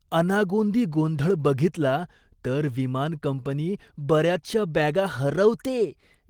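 Nothing technically wrong turns up anywhere in this short speech recording, so there's no fault to point to.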